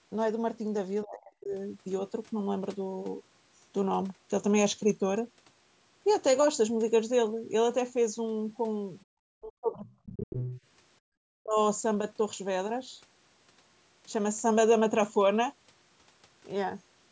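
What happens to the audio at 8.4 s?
Nothing goes wrong at 8.4 s: the speech carries on intact through that moment, with only the ordinary call microphone processing shaping it, so there is no dropout, glitch or distortion to report there.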